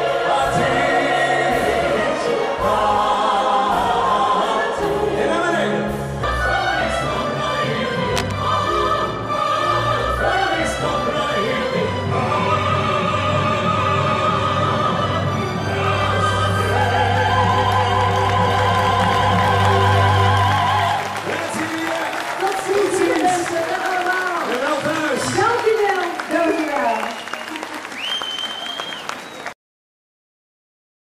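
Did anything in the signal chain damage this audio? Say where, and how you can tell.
Yes. A worn analogue connector likely shifted, causing cable scratch noise from 8.16 to 8.32 s: dense, uneven rustling about 10 dB below the sound.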